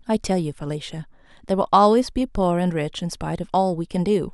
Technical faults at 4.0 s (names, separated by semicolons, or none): none